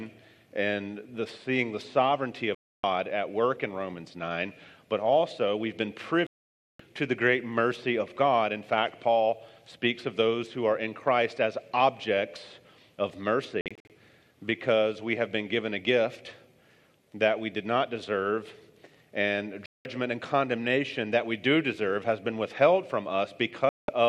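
At 2.55 s the audio mutes for about 0.29 s, and at 6.27 s for about 0.53 s. Both are digital broadcast dropouts: the receiver stopped getting decodable frames and silenced the output until valid ones arrived. At 13.61 s the hole is broken into several short gaps spread over 0.29 s, none longer than 48 ms, which fits 24 ms frames failing intermittently. Further mutes of about 0.19 s follow at 19.66 s and 23.69 s. The content inside each gap is simply gone.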